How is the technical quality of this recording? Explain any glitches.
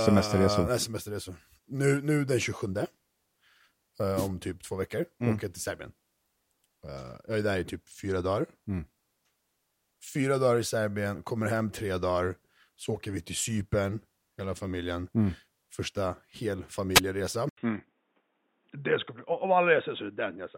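The recording has three audible faults: two radio noise bursts from the wireless link and a change of input device near the end.

Wireless microphone noise hits occur at 4.16–4.29 s, just before "typ två veckor mm", and at 16.94–17.00 s. Each is a brief swish of static: the FM signal faded as reflections cancelled, and receiver noise rose over the speech.

At 17.49 s there is an 80 ms gap, and from then to the end the sound turns dull, with nothing above 3.8 kHz. It is roughly 5 dB quieter, and a new noise floor sits around 40 dB below the speech. The cause is likely an input switched to a poorer device, such as a headset's call profile.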